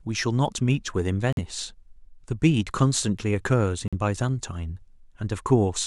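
Bluetooth dropouts at 1.33–1.39 s and 3.88–3.94 s: the speech cuts to silence, likely from late packets being discarded, then resumes roughly 46 ms further along, as if it had kept playing.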